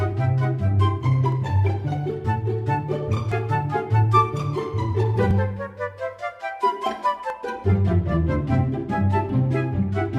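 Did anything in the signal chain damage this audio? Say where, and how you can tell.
Yes. There is a small click or tiny skip at 1.32, 3.32, 5.31, 7.30 and 9.29 s, one almost exactly every 2 s, where the waveform jumps abruptly. That steady rhythm points to the streaming or network stage and an overlap between stream segments. Each 2 s segment's time stamps overlap the next, so the player trims a few milliseconds it wrongly treats as duplicated. Genuine sound is lost, and the join lands off-phase.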